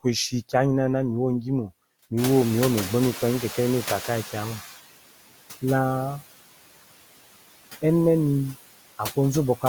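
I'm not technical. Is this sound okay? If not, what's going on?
No. Throughout the clip there are noise suppressor artifacts: the background noise is pushed down between phrases and returns under speech. When the room noise jumps up around 2 seconds, you hear the noise suppressor catching up: from 2.17 to 4.73 s the noise comes through louder, then sinks over about two and a half seconds as the suppressor adjusts.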